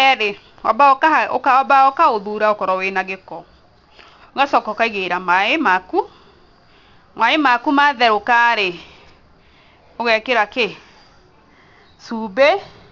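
Speech with aliasing throughout: sibilants sound gritty and metallic, and the spectrum runs hard up to a 6 kHz edge. High content was folded back to unrelated pitches, roughly 25 dB below the signal, which fits a downsample to 12 kHz without an anti-alias filter.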